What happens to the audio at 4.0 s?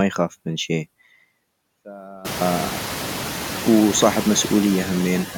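Noise suppressor artifacts are present at 4.0 s, as they are throughout the clip. Frame by frame, the suppressor cuts bands it judges to be steady noise by about 9 dB. The room noise, louder since about 2 s, dips between words and swells under them.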